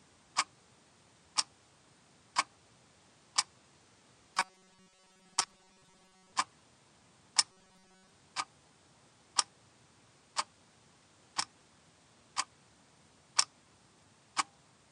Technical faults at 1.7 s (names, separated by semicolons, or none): none